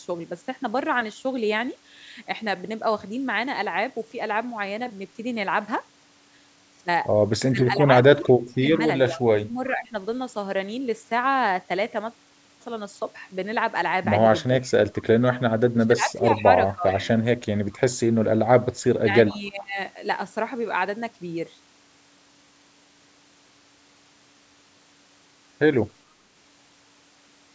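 From 7.51 to 9.94 s, an echo canceller likely faced both parties talking at once, failed to tell its own talker from the loudspeaker echo, and suppressed both. The speech dips by as much as about 25 dB, losing roughly a second of level in pieces. The same speech suppressed in double talk returns briefly at 14.61 to 14.67 s (about 15 dB), across 15.56 to 17.08 s (about 20 dB, around a second in total), and at 18.95 to 19.78 s (about 20 dB, about half a second), each time as a ducked stretch.

Within those same moments, a loudspeaker-side canceller likely let part of the microphone pickup through, so an echo leak sends the speech back 422 ms late. It is heard at 8.23 to 8.78 s and 16.89 to 16.93 s at about 20 dB below the speech, at 14.66 to 14.72 s at about 30 dB below, and at 19.31 to 19.49 s at about 25 dB below. It comes through faint, trailing the voice.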